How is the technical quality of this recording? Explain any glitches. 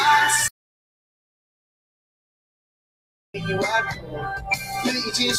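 The recording has real problems: a long silent gap, plus processing that keeps reshaping the sound.

Throughout, a noise suppressor applied to music or sounds is active. It was designed for speech, so it treats sustained tones and reverberant tails as noise and pulls them down by around 10 dB. Onsets survive while held material sinks, giving a pumping, thinned character.

From 0.48 to 3.34 s there is an audio dropout to silence. The input was likely lost for a while, and the recorder kept writing silence. About 2.86 s of sound is missing, replaced by dead digital silence with no room tone, and the audio breaks off and resumes mid-flow.

Between 3.91 and 4.71 s, the sound is cut by the noise suppressor. It misjudged this passage as noise and attenuated it harder than the surrounding audio, by up to about 10 dB, across most of that stretch. Sustained and decaying parts drop away early while sharper transients still come through.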